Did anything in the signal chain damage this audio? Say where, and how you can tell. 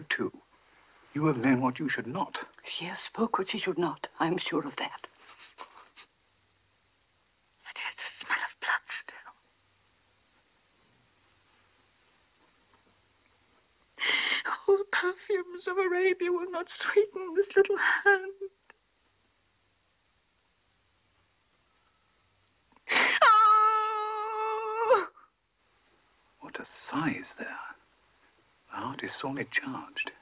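No, nothing audible points to damage at any stage of the chain, from capture through to playback.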